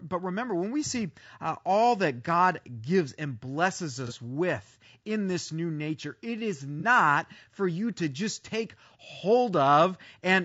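Throughout, the speech has a rough, grainy texture with noise between harmonics and a thin, synthetic top band, likely low-delay AAC compression at a bitrate near 32 kbps.

At 4.07 to 4.12 s, after "gives and blesses", and at 6.80 to 6.85 s, after "new nature it is", AAC frame loss with concealment fills a 30 ms gap, pointing to a single lost frame each time, with a brief smeared, noisy patch.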